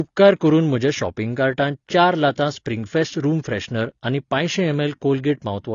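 Throughout the speech, nothing is present above 7 kHz, and the sound is dull and smeared, with a plainly audible fizzy, warbling texture on sibilants and held sounds. This points to AAC compression, likely AAC-LC at a low bitrate around 24 kbps, quantising coarsely and cutting the top band.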